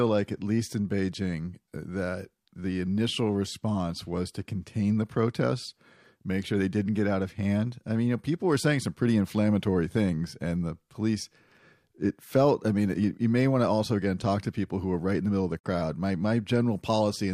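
A digital broadcast dropout hits from 15.59 to 15.68 s, just after "the middle of the". The receiver lost valid data and muted with an 8 ms fade. About 43 ms of speech vanishes, which fits a single lost frame, before sound resumes.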